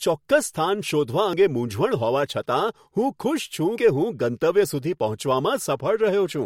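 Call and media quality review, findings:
Audio missing between chunks: two skips in the speech, at 1.33 s and 3.78 s, each losing around 50 ms with the two sides butted together, no silence. Spacing of roughly 2.5 s points to chunked capture or processing, likely dropping a slice at each chunk handover. Worth checking the buffer rollover in the recorder or pipeline.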